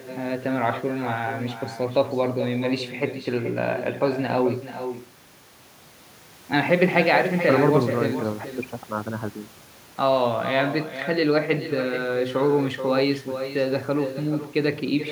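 From start to finish, the speech carries echo with no canceller: a distinct copy returns under half a second later, about 10 dB down and thinner. Unlike room reverberation, it is a separate delayed repeat, not a smooth decaying tail.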